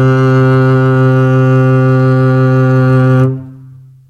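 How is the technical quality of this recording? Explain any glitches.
Nothing here needs explaining: the music comes through without any glitches, dropouts or odd noises to point to.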